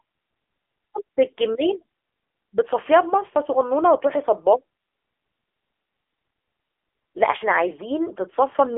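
Throughout, AMR narrowband mobile codec damage leaves nothing above 3.6 kHz. Unlike a plain band-limit, the speech also sounds buzzy and synthetic, which fits a low rate near 8 kbps.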